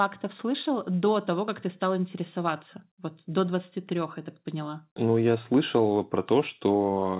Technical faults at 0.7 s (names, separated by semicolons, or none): none